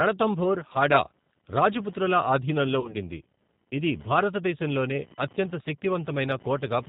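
From start to finish the speech carries computer activity noise: a faint buzzing chirp pulsing at around 1 kHz, roughly 30 dB below the speech. The processor's or peripherals' changing load shifts the shared ground of the audio circuit. What separates it from mains hum is that it follows the computer's activity rather than sitting on a steady low fundamental, and unlike codec grit it keeps its rhythm through pauses, ignoring the speech.

The whole clip has also passed through the G.729 codec, here the G.729A variant at 8 kbit/s, and the damage is plainly audible. The codec rebuilds each 10 ms frame from a vocal tract filter, a pitch predictor and a few pulses, and cuts everything above 4 kHz. The result is dull, slightly rough, synthetic-sounding speech. That sets it apart from a simple low-pass filter, which would muffle the speech without adding this buzzy, rebuilt texture.

At 0.73 to 0.77 s there is VoIP packet loss concealed by the speech codec. 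About 20 ms of audio is missing, which fits a single lost packet. The decoder carries its last pitch and filter forward at falling gain, so the sound is stretched and fades. A second, longer concealment follows at 2.80 to 2.96 s, just after "రాజపుత్రుల ఆధీనంలో". Here about 40 ms is lost, pointing to two packets. Because each decoded frame builds on the one before, the speech stays weak and distorted for tens of milliseconds or more after data returns. A plain dropout would instead be clean silence with an immediate recovery.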